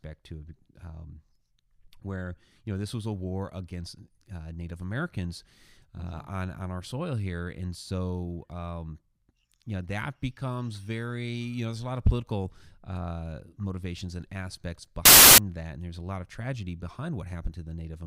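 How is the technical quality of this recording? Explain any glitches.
The speech has one clear glitch. From 15.05 to 15.38 s, right after "uh motivations and aspects" and before "that and there's a", the samples are built from the wrong bytes. The bytes in each sample are misaligned or swapped, so the rapidly changing low-order bits land in the high-order position. The result is a third of a second of loud, harsh broadband noise. On a waveform this shows as a dense block of large, erratic values. On a spectrogram it is a broadband smear from bottom to top.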